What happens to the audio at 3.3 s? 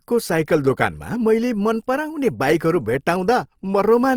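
At 3.3 s the speech carries Opus compression damage, present throughout the clip rather than starting there. When bits run short, bands are filled with noise or folded copies, so the sound turns grainy and rough rather than swirling as MP3 does. Sound reaches about 20.2 kHz, so the encoder is likely running full-bandwidth music mode at a low rate near 24 kbps.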